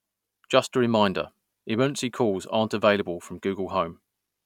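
No technical faults can be heard anywhere in this speech recording; the signal stays steady and intact throughout.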